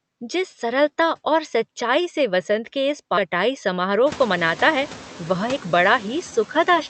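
Noise suppressor artifacts run through the whole clip. The suppressor pulls what it judges to be steady background noise down by about 8 dB, frame by frame, so the noise dips in the pauses and creeps back under the speech.

At 3.17 s there's a skip ahead. Roughly seven tenths of a second of speech was dropped while later audio was already queued, so playback jumps straight to it with no gap or fill, and the two edges butt together abruptly.

From 3.76 to 4.29 s the jitter buffer speeds up. It trims short pitch-period chunks, a few tens of milliseconds in total, to bring the delay down. The speech runs about 7% fast at the same pitch and sounds a bit hurried, just as the room noise rises around 4 s.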